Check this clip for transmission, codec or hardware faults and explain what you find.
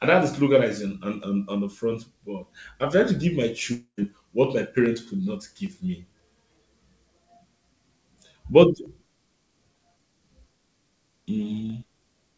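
One transmission fault is audible, a break in the speech shortly before four seconds, heard over a call path whose audio stops at 8 kHz, which fits G.722 at 64 kbps.

From 3.72 to 3.99 s the speech gives way to a fading buzz lasting about a quarter second, then briefly near-silence, before resuming with a stretch missing. The likely cause is a long network dropout, with the receiver extrapolating the last sound until giving up.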